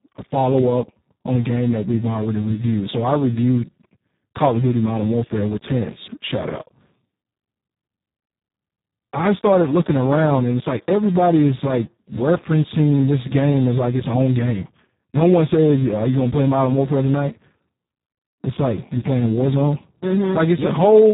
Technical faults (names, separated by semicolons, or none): Speex codec